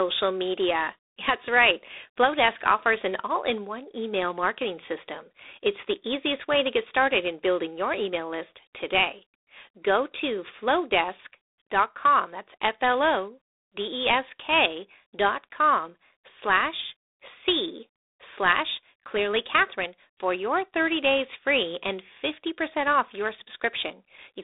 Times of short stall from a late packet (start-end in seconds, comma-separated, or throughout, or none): none